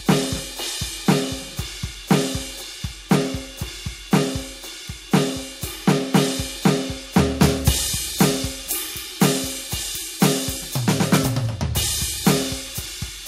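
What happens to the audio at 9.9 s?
At 9.9 s the music sounds thin and overly bright, with the top end glassy and edgy and the bass and lower mids seemingly pulled back. This is pre-emphasis left on, running from 7.40 s to the end of the clip. The treble boost added before recording was never undone by the matching de-emphasis, leaving frequencies around 10 kHz about 8 dB hotter relative to 1 kHz, a shape that fits the CD 50/15 µs curve.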